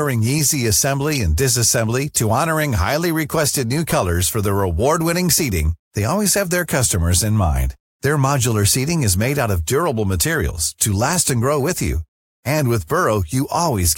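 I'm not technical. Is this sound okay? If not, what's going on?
No, there are two tiny glitches in this speech, at 1.15 to 1.17 s and 3.90 to 3.92 s. Each is damaged data in a compressed stream: a scrap of the file got garbled, so the player briefly misreads it before catching up again.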